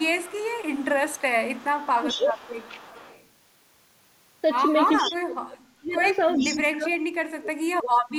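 A speech recording with echo leak and speech suppressed in double talk. From 0.0 to 3.26 s a faint delayed copy of the talker, about 20 dB below the direct speech, trails it by 416 ms. It returns more strongly, about 10 dB down, at 4.97 to 5.16 s and 6.01 to 6.6 s. The likely cause is a far-end loudspeaker whose echo canceller let some of its microphone pickup back into the call. A fixed 416 ms lag that repeats the speech distinctly sets it apart from room reverberation, which smears sound continuously within tens of milliseconds. The talker's level also collapses at times: a shallow dip of about 10 dB lasting roughly 200 ms between 1.99 and 2.34 s, then deep cuts of about 40 dB across 5.01 to 6.02 s and from 6.37 s to the end. This is likely an echo canceller treating simultaneous talk as echo and attenuating both. Unlike packet-loss dropouts, these are gain reductions rather than robotic fills.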